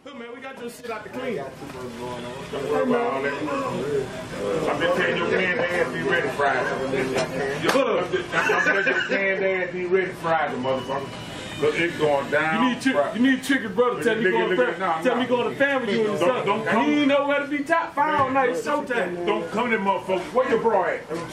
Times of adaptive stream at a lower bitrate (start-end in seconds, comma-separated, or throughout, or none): 5.00-11.00